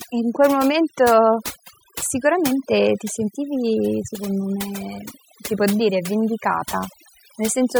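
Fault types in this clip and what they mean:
overdone noise removal: throughout, noise reduction set too strong mutes bands near its noise estimate, leaving a lowered background that breaks into twinkling specks.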